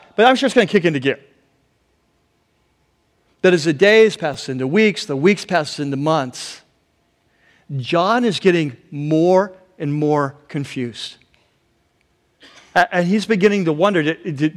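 Hard clipping first appears from 0.23 to 0.87 s, about 3 dB over the limit, and again from 3.45 to 4.03 s. Peaks exceed what a stage can pass and are cut flat. This adds high harmonics, heard as crackle on loud syllables.

At 4.34 s a repeated buffer occurs. Audio arrived late, so one short block plays twice more. Its length fits a 5 ms buffer. It sounds like a brief buzz or click, with almost nothing lost.

Hard clipping returns at 5.28 to 5.57 s, 8.48 s, 9.37 s, 12.77 to 12.83 s, 13.45 s and 13.84 s. The 12.77 s burst is worst, about 6 dB over, and the brief ones crackle.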